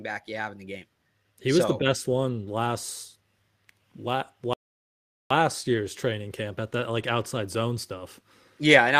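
A rebuffering stall interrupts the speech from 4.53 s to 5.31 s. The player exhausted the audio it had downloaded and paused playback until more data arrived, so the sound drops to silence for about 0.77 s, then picks up exactly where it stopped, with "year's training camp at". Nothing is skipped or repeated; the gap simply stretches the timeline, leaving an unnatural dead pause.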